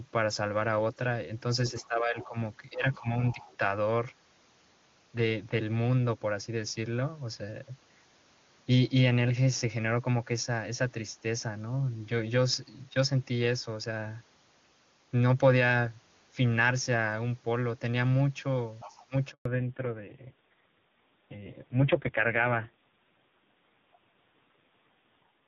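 Other side's voice leaking through appears at 1.68 to 1.88 s, 2.21 to 2.26 s, 2.93 to 3.00 s, 3.41 to 3.55 s and 18.8 to 19.06 s. These are faint scraps of a second voice, roughly 20 to 35 dB below the speech, likely loudspeaker echo that the canceller failed to remove.

Speech suppressed in double talk appears near those scraps at 1.81 to 2.36 s, 2.71 to 3.59 s and 19.07 to 19.14 s. The talker's level dips by roughly 10, 15 and 25 dB respectively, in short bites. This is likely the canceller turning down everything while both sides spoke.

A handover gap follows at 19.31 to 19.45 s, a 140 ms silence where speech fades and no frames arrive while the call switches networks.

Fallback to narrowband then runs from 19.45 s to the end. Until this point the wideband HD Voice sound is clean, which fits AMR-WB at 23.85 kbit/s. Everything above 4 kHz now disappears, and the voice turns dull and rough, consistent with AMR-NB at 5.9 kbit/s.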